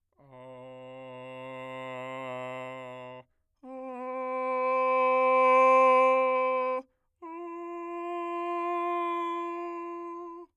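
No technical faults can be heard anywhere in the music. Nothing interrupts or disturbs the sound at any point.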